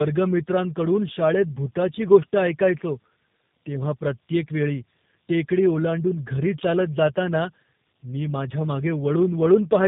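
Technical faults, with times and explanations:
Throughout: tandem speech coding. The speech passes through three separate speech codecs in a row, CVSD, AMR-NB and finally G.729A, each re-encoding the previous one's damaged output, so roughness, muffling and warble accumulate; nothing is heard above 3.8 kHz.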